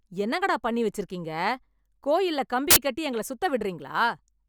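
At 2.71 to 2.76 s, right after "கோயில்ல கம்பி", there's file tags played as audio: embedded cover-picture data read as samples, giving a hard-edged burst of very loud white noise.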